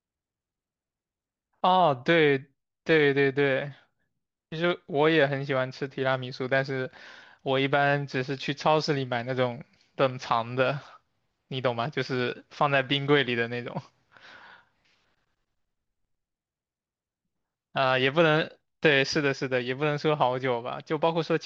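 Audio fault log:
Nothing to log here; the speech comes through without a single fault anywhere along the way.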